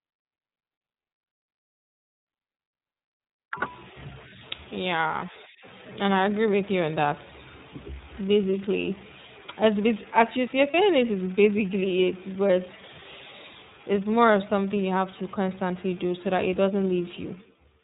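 Throughout the speech runs through the iLBC codec. Nothing is left above 4 kHz, so a spectrogram shows a flat ceiling there, and the plainly audible roughness and synthetic edge, with 30 ms blocks coded independently, points to the 13.33 kbps mode.

From 10.71 to 10.74 s, just before "this is basically it", lost iLBC frames leave a brief held, faintly buzzy vowel as the decoder repeats the last pitch cycle with noise. The waveform shows a short stretch of copied periods, fitting a single 30 ms frame, and the voice recovers immediately afterwards.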